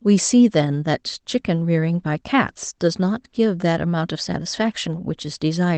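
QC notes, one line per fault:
No faults heard in this speech clip.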